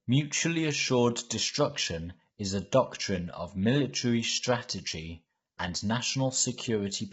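Speech whose encoding was likely low-delay AAC compression (AAC-ELD), with heavy damage suggesting a bitrate around 16 kbps. At this low bitrate, throughout the clip the voice sounds rough and grainy, with noise between harmonics and nothing above 7.7 kHz.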